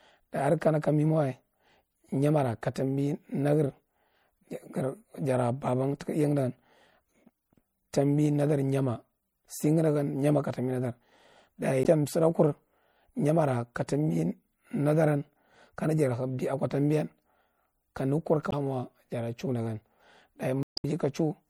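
Throughout the speech, an encoder that is short of bits has likely thinned the signal through MP3 compression, which fits a low bitrate near 64 kbps. It discards the treble above a fixed cut-off and lets weak frequency lines flicker on and off between frames, giving a plainly watery, swirling quality, with metallic chirps on s sounds and smeared attacks.

At 11.82 to 11.86 s, damaged data in a compressed stream makes the decoder misread the frames, lose its sync and hunt for the next header. The result is a brief 40 ms blip. The same happens at 18.49 to 18.53 s, just after "kane kur". A longer 0.22 s disruption follows at 20.63 to 20.85 s.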